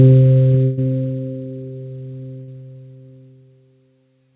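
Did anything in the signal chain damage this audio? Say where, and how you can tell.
Yes, at the network stage. A burst of packet loss hits from 0.64 to 0.79 s. The last sound is stretched and fades, then audio resumes with about 140 ms missing.

A short concealed packet loss appears at 2.43 to 2.49 s. Roughly 40 ms arrived too late. The receiver continued the prior sound, leaving a brief smear.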